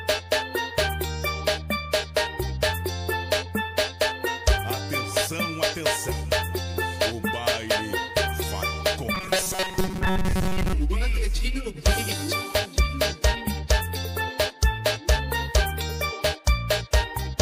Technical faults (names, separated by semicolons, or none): robotic sound from repeated short buffers